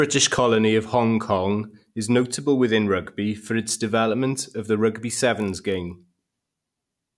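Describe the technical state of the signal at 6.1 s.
At 6.1 s you're inside a stretch where the resampler restarted on every block, running from 5.4 s, just after "development of the rugby", to the end. Each 20 ms block was converted on its own, so every edge carries a small error, heard as a 50 Hz buzz under the speech.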